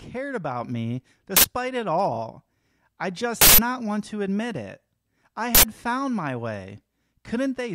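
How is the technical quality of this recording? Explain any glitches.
The recording is marred by three uninitialised buffer glitches. The first comes at 1.37–1.45 s, right after "about me". The second runs 3.41–3.58 s, just before "not want to admit". The third falls at 5.55–5.63 s, between "to admit it I" and "found my". Each is a loud burst of digital noise where blocks were played before any audio was written into them, so stale memory came out as sound. The 85 ms bursts fit 4096-sample blocks, the 171 ms one an 8192-sample block. Unlike a dropout, which goes silent, these bursts are loud and bear no relation to the surrounding speech.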